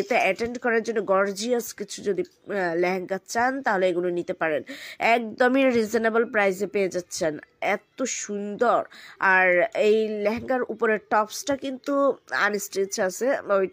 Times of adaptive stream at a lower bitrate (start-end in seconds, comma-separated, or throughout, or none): none